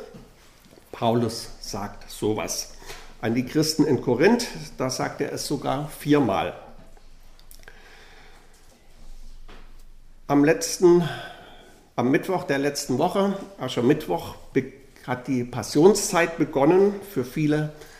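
No technical faults can be heard anywhere in this clip. Nothing in the audio calls for a timestamp or a note on its cause.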